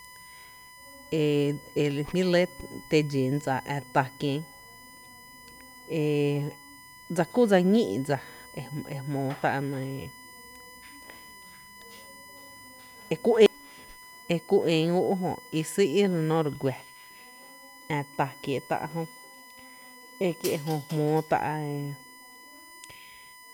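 All the way through the speech there's a USB whine, a steady 1 kHz tone loudest at 2 kHz, roughly 25 dB down, from bus frames leaking in through the power or ground.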